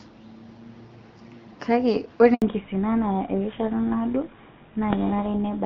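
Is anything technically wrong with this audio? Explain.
Yes, there are two faults, both at the same moment mid-clip.

Handover gap, 2.34 to 2.42 s: the call switches between networks and no speech frames arrive while the link is re-established. The sound fades out within a few tens of milliseconds and stays silent for 80 ms, so that stretch of speech is lost.

Fallback to narrowband, 2.42 s to the end: after the handover, the call leaves the AMR wideband (HD Voice) codec, whose first half sounds clear with only light coding damage, and drops to a narrowband codec consistent with GSM full rate. Nothing above 4 kHz remains, so the speech becomes duller and rougher.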